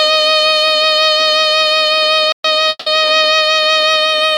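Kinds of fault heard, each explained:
Playback stall: the music cuts to silence for 120 ms at 2.32 to 2.45 s, then resumes where it stopped, likely from the player running short of data.
Call audio freeze: at 2.69 to 2.88 s the last sound is stretched into a fading 170 ms fill, then 20 ms of silence, likely from a starved jitter buffer, with nothing lost.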